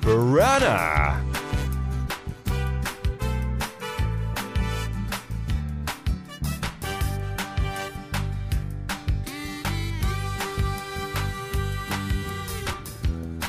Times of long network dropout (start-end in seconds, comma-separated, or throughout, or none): none